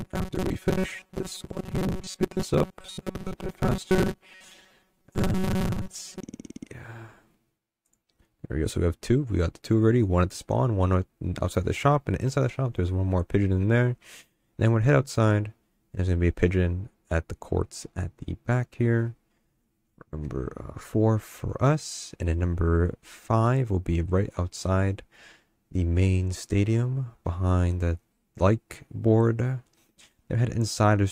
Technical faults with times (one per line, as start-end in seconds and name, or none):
0.01-6.22 robotic sound from repeated short buffers